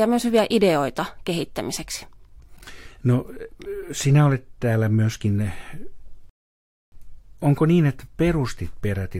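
A rebuffering stall runs from 6.30 to 6.92 s. The player exhausted its downloaded audio and paused until more arrived, so the speech cuts to silence for about 0.63 s, then picks up exactly where it stopped. Nothing is skipped, but the gap adds time.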